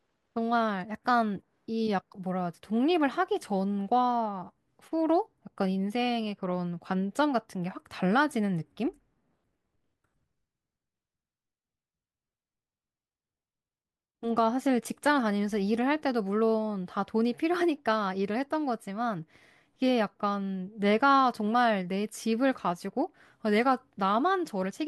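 Speech recording with no technical faults heard anywhere in it.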